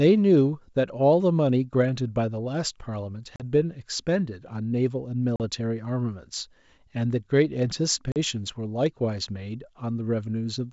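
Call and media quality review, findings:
Packet loss on an ADPCM call, G.722 wideband path: hard-edged 40 ms silent gaps at 3.36–3.43 s, 5.36–5.41 s and 8.12–8.17 s, each about two packets' worth. On resume, slight distortion as the decoder's predictor and step size resynchronise. Unlike concealed loss, there is no fill.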